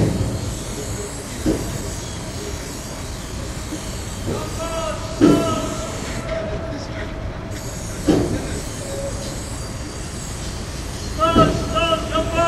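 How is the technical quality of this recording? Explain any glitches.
Two glitches are audible, both early in the clip, the second tied to how the receiver's jitter buffer handled late audio.

Skip ahead, 1.27 to 1.29 s: playback jumps forward with no fill at all, so roughly a second of sound is simply missing and the material on either side is butted together. This happens when a stretch of audio is discarded, either lost in transit or dropped by an overflowing jitter buffer, while later audio is already queued. The result is an abrupt discontinuity rather than a silence, and the playback delay shrinks by about a second in one step.

Jitter buffer speed-up, 1.37 to 3.42 s: immediately after the jump, the sound runs at about 111% speed for roughly two seconds while its pitch stays the same. The buffer was still holding more audio than its target, so the receiver repeatedly cut out short slices of one or a few pitch periods, about 0.2 s in total, to pull the delay back down. 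The audio sounds hurried, and any steady rhythm loses its even timing during this stretch.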